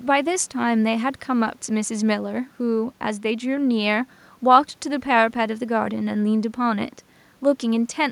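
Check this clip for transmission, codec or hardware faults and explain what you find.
Nothing here points to a transmission, codec or hardware problem; the speech comes across without any dropouts, glitches or distortion worth flagging.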